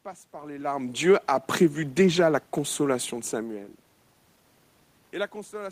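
From 0.97 to 1.32 s, after "par les larmes", automatic gain falling lowers the level by about 3 dB, pulling the speech and the room noise down together before "prévu déjà la consolation".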